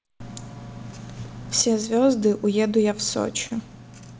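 A short piece of speech with two separate problems. From 1.62 s right through to the end, the level suddenly sinks by about 6 dB and stays down. That's the signature of one channel dropping out, most likely one side of a stereo feed going dead before the mono fold-down. Everything the two sides shared loses half its contribution, and anything carried only by the lost side simply vanishes. Then, between 3.47 and 3.53 s, there's a short stall from a late packet. The jitter buffer ran dry, so the receiver held the last bit of sound for about 31 ms until the packet showed up, then carried on where it left off. Nothing is actually lost. The moment is just drawn out with a faint buzz or dip, and everything after it lands about 31 ms later. All of this came through a G.722 call path at 64 kbps, which is why nothing reaches above 8 kHz.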